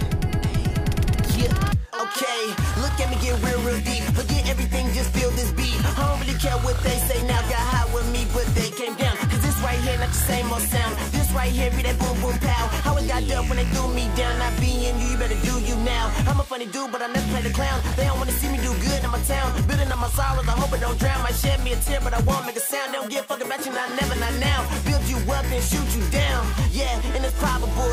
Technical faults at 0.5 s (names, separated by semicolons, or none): none